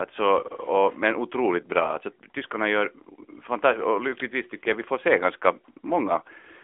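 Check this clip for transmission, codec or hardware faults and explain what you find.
The speech passes through an AMR narrowband mobile codec for its whole length. Nothing above 3.6 kHz survives, and the line band runs from roughly 250 Hz to 3.5 kHz, so the voice sounds thin and boxed in. The codec rebuilds each 20 ms frame from a vocal-tract model driven by a few pulses. Here that leaves a plainly audible buzzy, synthetic edge, which fits a mid-rate mode near 10 kbps. That synthetic edge separates it from a simple telephone-band filter, which narrows the sound without the buzz.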